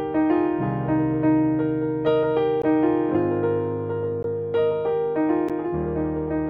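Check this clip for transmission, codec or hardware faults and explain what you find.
Three short dropouts appear. They are blocks of digital silence at 2.62 s, 4.23 s and 5.49 s, lasting about 17 ms, 17 ms and 12 ms. The output buffer likely went unfilled, and the last gap fits a 512-sample buffer. The last is heard as a tick, and each shows as a near-flat line in the waveform and appears as a blank vertical stripe on a spectrogram.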